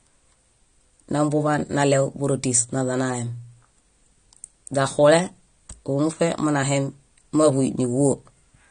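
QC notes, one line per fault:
Throughout, AAC compression: nothing above 9.7 kHz and a dull, smeared texture, unlike a plain low-pass, likely from AAC-LC at around 32 kbps.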